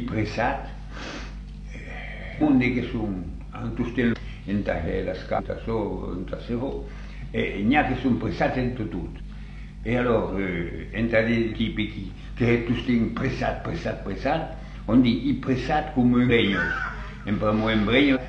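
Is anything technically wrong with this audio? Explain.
Yes. Compressed frames are skipped at seven points: 2.37, 4.09, 5.34, 9.15, 11.47, 16.26 and 18.12 s. At each, whole blocks of the encoded stream never reach the output, so the sound leaps forward, losing anywhere from a fifth of a second to about a full second. The jumps match multiples of a 46.4 ms frame. Each join is brief, roughly 50 to 60 ms. Unlike a dropout, there is no silent gap, only a sudden discontinuity.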